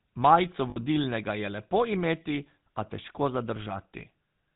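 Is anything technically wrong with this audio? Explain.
Yes, there are two problems. The whole clip has gone through the GSM full-rate codec. It models the vocal tract and drives it with a thinned-out pulse train, so everything above 4 kHz is gone and the speech picks up a plainly audible buzzy, gravelly roughness, consistent with the 13 kbps full-rate coder.

From 0.70 to 0.78 s there are lost GSM frames. The decoder covers the gap by repeating the last good frame, so for roughly 60 ms, about three frames' worth, the speech freezes into a short, rough metallic ring.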